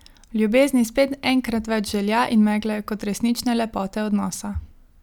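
No technical faults can be heard anywhere in the recording. There is no moment in the speech that stands out as an event to mark.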